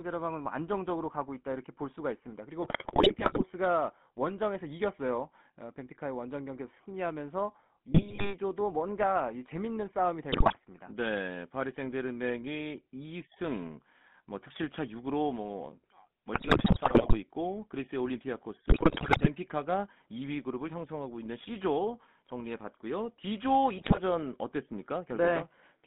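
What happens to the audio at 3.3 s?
At 3.3 s you're inside a burst of GSM bit errors running from about 2.62 to 3.43 s. Over that stretch, corrupted bits are reaching the speech decoder, so the filter, pitch and gain values it rebuilds the sound from are wrong for frame after frame. The result is a garbled, squawky patch with pops and level jumps, where the speech briefly turns to gargling. The damage is dense enough that it sounds like dozens of consecutive frames are hit.

Underneath that, the whole clip carries the GSM full-rate codec, which fits a 13 kbps stream. It rebuilds speech from a vocal-tract model excited by regularly spaced pulses, and that coarse excitation gives the speech a plainly audible buzzy, gravelly roughness. The line is band-limited to roughly 150 Hz to 3.5 kHz, so there's no low-end weight and no air or sibilant sparkle on top, just that thin, boxy phone sound.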